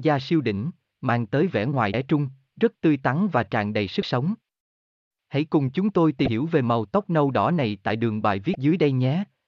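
Short glitches break into the speech four times, at 1.91 to 1.94 s, 4.00 to 4.03 s, 6.25 to 6.28 s and 8.52 to 8.55 s, each lasting about 34 ms. They come from damaged data in the compressed stream. Corrupted bytes make the decoder misread the affected frames and lose sync, and it produces a brief glitch until it finds the next valid frame header and recovers.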